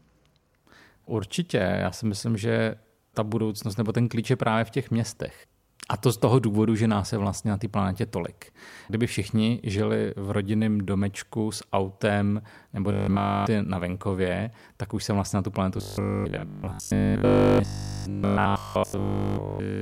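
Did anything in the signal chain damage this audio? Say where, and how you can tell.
Yes. Robotic sound from repeated short buffers at 12.92–13.48 s and from 15.78 s onward: a rigid 50 Hz buzz, likely a starved buffer stage looping 20 ms blocks.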